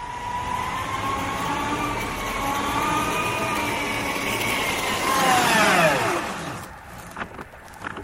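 Processor overload crackle tears through the audio from 4.39 to 5.15 s and 7.23 to 7.88 s: dense, gritty skips of roughly 10 ms buffers, unlike isolated dropouts.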